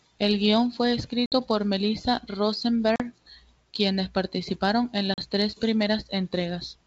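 Speech with packet loss on an ADPCM call: hard-edged silent gaps at 1.26–1.34 s (about 60 ms), 2.96–3.02 s and 5.14–5.20 s (about 40 ms each). These show as abrupt blank vertical strips on a spectrogram and flatlined waveform. Each gap is followed by briefly, slightly distorted audio while the decoder's predictor and step size resynchronise.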